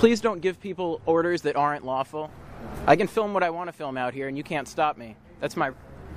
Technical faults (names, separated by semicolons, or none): compressed frames skipped